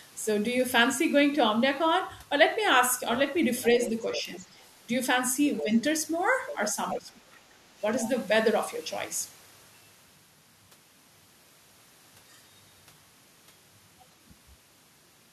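From 3.62 to 4.64 s, the other side's voice leaks through, about 15 dB below the talker. Loudspeaker sound was likely picked up by the microphone and not fully cancelled. Inside that span, from 3.89 to 4.42 s, speech is suppressed in double talk. The talker dips by a few decibels, likely because both sides spoke at once and the canceller turned both down. A short leak follows from 5.56 to 5.64 s, about 10 dB down. From 5.61 to 5.73 s the talker dips by about 10 dB. Another leak runs from 6.47 to 6.98 s, about 10 dB down. From 6.74 to 7.33 s comes the deepest dip, about 20 dB. A brief leak appears from 8.02 to 8.1 s, about 15 dB down. A faint one, about 35 dB down, sits at 13.99 to 14.05 s.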